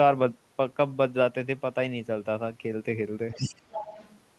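From 3.3 s to 4.15 s a second, fainter voice sits underneath the speech, around 15 dB lower. This is the other side's voice leaking through, likely because the far end was playing from a loudspeaker and the echo canceller left part of it in the microphone signal.

Within that stretch, between 3.35 s and 3.44 s, the main talker briefly dips by roughly 10 dB for about a tenth of a second, sounding momentarily pulled back. That is speech suppressed in double talk, likely the echo canceller turning everything down while both sides spoke at once.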